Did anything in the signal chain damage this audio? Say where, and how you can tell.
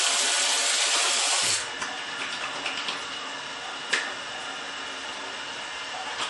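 Yes, at the codec stage: likely low-bitrate MP3 compression throughout, fitting roughly 48 kbps. Nothing survives above 11.4 kHz, and plainly audible watery, swirling artefacts smear the attacks.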